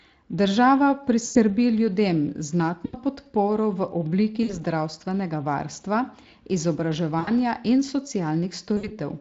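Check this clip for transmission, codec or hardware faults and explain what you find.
Yes: five dropouts of VoIP packet loss concealed by the speech codec, at 1.25 to 1.38 s, 2.85 to 2.97 s (just before "podporo v"), 4.43 to 4.60 s (just after "podporo v"), 7.19 to 7.31 s and 8.77 to 8.92 s. Each loses 60 to 100 ms of sound. The decoder stretches the last pitch and filter into a buzzy tone or coloured noise that fades, and the audio stays weak briefly afterwards. The stream itself sounds lightly coded, consistent with a mid-rate Speex link.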